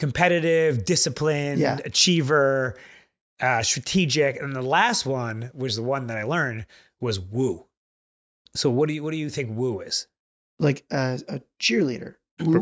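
The speech signal shows no audible technical fault at any point.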